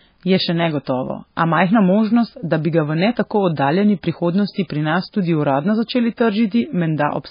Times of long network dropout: none

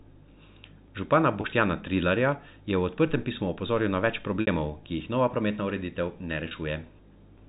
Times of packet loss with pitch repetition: 1.41-1.44, 4.41-4.47, 6.48-6.51

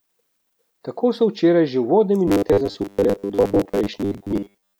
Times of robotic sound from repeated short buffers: 2.28-4.80

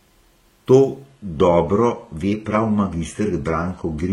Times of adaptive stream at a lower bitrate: 1.07-4.12

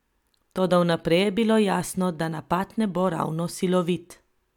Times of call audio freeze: none

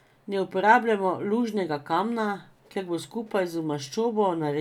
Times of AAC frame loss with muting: none

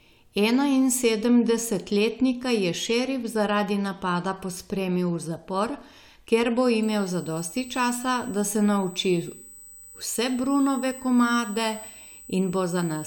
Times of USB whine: 6.83-13.06

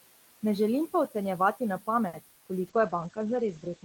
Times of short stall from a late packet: 2.07-2.15

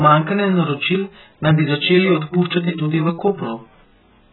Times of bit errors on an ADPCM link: none

